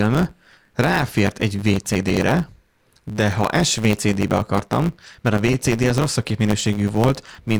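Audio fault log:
throughout: block size mismatch (truncated). A steady buzz at 109 Hz sits under the speech, and the talking runs about 1.09 times fast while the timbre stays. Each block written upstream is longer than the block read downstream, so its tail is discarded at every block boundary. Those regular cuts produce the buzz, and the lost material shortens the timeline. A sample-rate mismatch speeds speech up too, but it raises the pitch and leaves no buzz.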